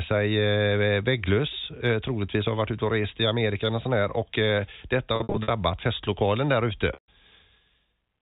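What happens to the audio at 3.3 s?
Nothing goes wrong at 3.3 s: the speech there runs on intact, carrying only the narrow, telephone-band character of its G.711 coding.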